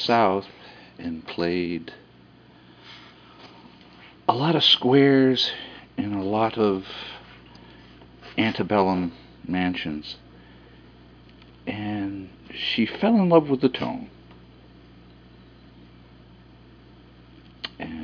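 No technical faults are audible.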